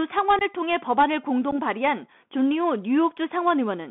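Throughout, the speech passes through a Bluetooth CVSD headset codec, band-limited to roughly 200 Hz to 3.5 kHz, which fits a 64 kbit/s link. Step-size overload makes sibilants scratchy over granular hiss. Unconcealed Bluetooth headset packet loss cuts about 19 ms from 0.39 to 0.42 s, then 11 ms at 1.51 s. A handful of packets become abrupt silent gaps.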